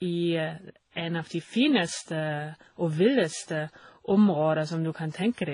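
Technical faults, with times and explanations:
Throughout, transcoding between lossy codecs: the speech stops dead at 10.1 kHz and carries layered, mismatched artefacts, likely from several low-bitrate encodes, each adding its own damage.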